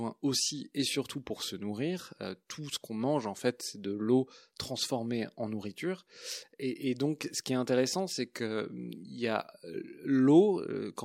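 Nothing goes wrong anywhere in this speech recording, so there's no technical fault to point to.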